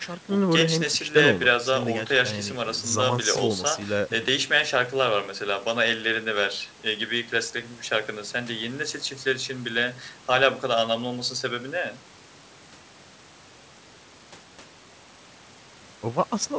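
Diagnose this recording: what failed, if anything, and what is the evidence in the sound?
Nothing in this recording has failed. The speech comes through a normal wideband call chain, with the highest frequencies stopping at about 8 kHz, which fits a codec such as G.722 and the call's microphone processing working as designed.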